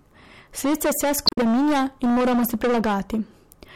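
Right from the start there's hard clipping on the speech. The level is pushed about 16 dB past what the stage can pass, so around a third of the samples get sliced flat. That piles on high harmonics, giving a harsh, fuzzy edge to every louder syllable.

Then between 1.24 and 1.38 s you get damaged data in a compressed stream. Part of the file's wrong, so the decoder can't read those frames cleanly, loses sync and hunts for the next header. You hear it as a short glitch.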